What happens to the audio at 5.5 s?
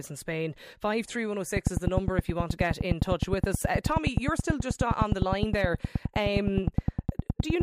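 A train of clicks runs from 1.57 to 7.62 s, regular pulses at 9.6 per second, likely from electrical interference, ticking sharply well above the speech.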